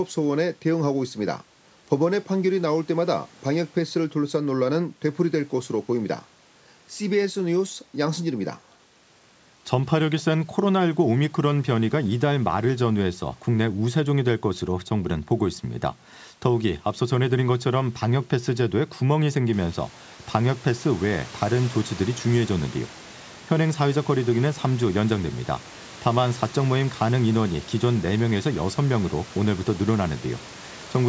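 No technical faults occur anywhere in this speech clip.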